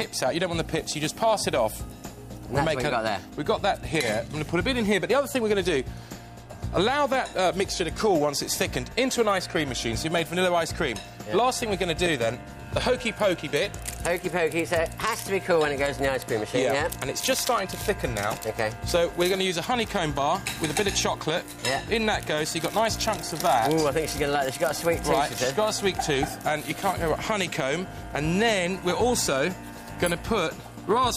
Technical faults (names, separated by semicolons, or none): none